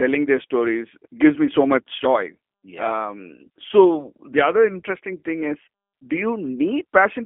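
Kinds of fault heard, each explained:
G.729 codec: the speech comes through a low-rate VoIP codec that rebuilds each short frame from a vocal tract model, a pitch predictor and a handful of pulses, so it sounds plainly rough and synthetic. The band is telephone-narrow too, roughly 250 Hz to 3.4 kHz, with nothing above 3.5 kHz.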